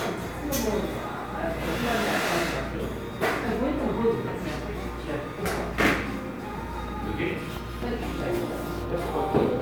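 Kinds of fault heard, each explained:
Nothing stood out as a problem on listening to this recording of sounds.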